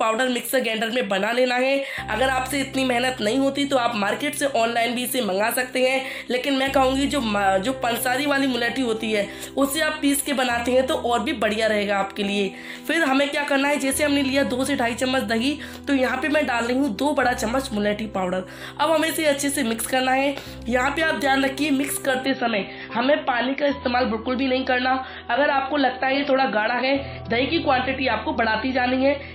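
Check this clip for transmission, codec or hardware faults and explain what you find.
There's one fault here, right at the tail end. From 22.26 s to the end at 29.34 s you get an adaptive stream dropping to a lower bitrate. The connection evidently slowed, so the player switched to a leaner version of the stream, which sounds like a fall from about 128 kbit/s MP3 to roughly 25 kbit/s. Everything above 5.8 kHz vanishes, so the top goes dull with more codec artefacts. The switch is abrupt, with no gap.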